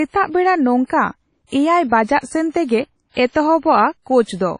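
The speech was likely squeezed through WMA compression at a low bitrate, around 32 kbps. Across the whole clip, nothing survives above 10.1 kHz, weak detail is dropped, and smeared quantisation noise leaves a washy, ringing hiss that swells and fades with the sound.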